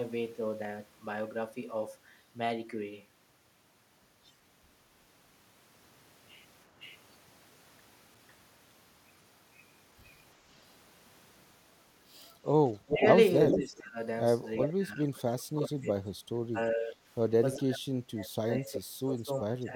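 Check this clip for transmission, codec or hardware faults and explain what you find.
Two faults are present in this speech recording: an echo leak in three places and speech suppressed in double talk in four, with the two overlapping at about 12.8 to 13.8 s and again near 14.7 s.

Echo leak: 6.81 to 6.97 s, 12.25 to 13.79 s and 14.62 to 14.73 s. A delayed copy of the speech returns, about 0.5 s late and about 20 dB down in the first case. The later two trail by 384 ms, at roughly the speech's own level and then about 5 dB below it. The likely cause is a far-end loudspeaker path whose echo canceller left residual pickup uncancelled and sent it back.

Speech suppressed in double talk: 12.83 to 13.98 s, 14.66 to 15.87 s, 16.52 to 17.01 s and 17.56 to 19.74 s. During these spans the talker's level dips, with deepest drops of about 20, 25, 15 and 30 dB. The final span is the longest and most severe. 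This is likely an echo canceller that could not tell the near talker from loudspeaker echo while both sides spoke, and attenuated everything.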